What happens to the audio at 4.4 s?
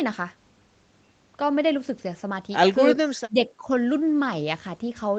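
Nothing goes wrong at 4.4 s: the speech continues intact through that moment, carrying only the ordinary band limit of the call path, with nothing above 8 kHz.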